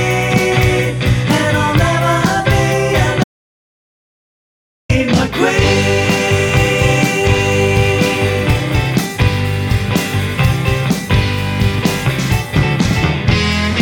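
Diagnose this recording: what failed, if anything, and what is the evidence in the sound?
Audio dropout to silence from 3.24 s to 4.89 s: the sound stops mid-flow and 1.66 s of silence follows, with no room tone at all. The input likely lost its connection while the recorder kept writing silence, so that stretch is gone for good.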